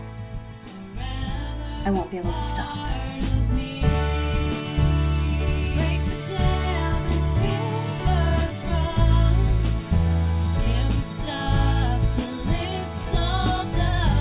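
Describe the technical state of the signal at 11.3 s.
Nothing at 11.3 s points to a technical fault; the signal is intact at that moment.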